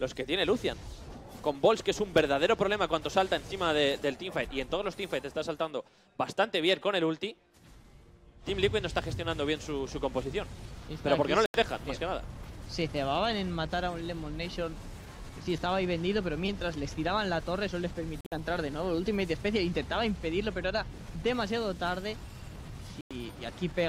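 A likely Bluetooth dropout, with packets missing the headphones' deadline and being discarded, cuts the sound to silence at 11.46–11.56 s (about 84 ms), 18.21–18.35 s (broken gaps, longest 56 ms) and 23.01–23.12 s. Each time, playback resumes further on, as if it had played on.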